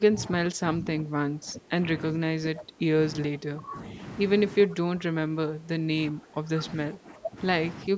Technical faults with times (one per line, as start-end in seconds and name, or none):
0.00-1.72 speech suppressed in double talk
2.12-2.89 speech suppressed in double talk
3.29-3.98 speech suppressed in double talk
4.66-6.50 speech suppressed in double talk
6.91-7.38 speech suppressed in double talk
7.89-7.97 speech suppressed in double talk